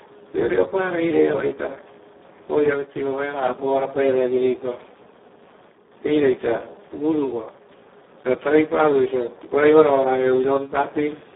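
Speex codec damage runs from start to finish. The speech has been squeezed through a CELP coder at very low quality, with a sound that fits a bitrate of around 4 kbps. So few bits are left for the excitation that the voice turns hoarse and noisy. The line band sits at about 300 Hz to 3.6 kHz, and nothing remains above 3.8 kHz. This thins the low end and dulls the top.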